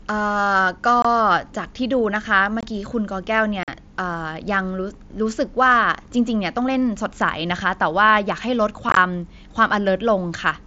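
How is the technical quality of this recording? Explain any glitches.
The speech carries a light grain from the mSBC headset codec and four short dropouts.

Unconcealed Bluetooth headset packet loss occurs at 1.02–1.05 s, 2.61–2.63 s, 3.63–3.68 s and 8.89–8.97 s. Lost voice packets between headset and phone were replaced with silence or an idle pattern instead of being patched over. The first two produce brief holes of about 23 ms with abrupt edges. The third is about 45 ms long. The last spreads gaps over 75 ms, none longer than 23 ms, and sounds like a rough, chopped crackle.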